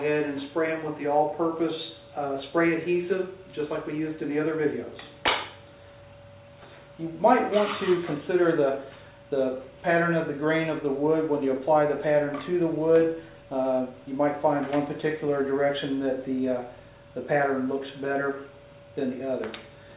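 No technical faults can be heard anywhere.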